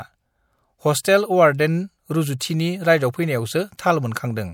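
At 1.03 s, just before "टेल अवार्डेन", and again from 2.39 to 2.41 s, there's pre-echo: the codec smeared quantisation noise across its block, so a brief hiss of about 20 ms creeps in ahead of each attack and blunts it.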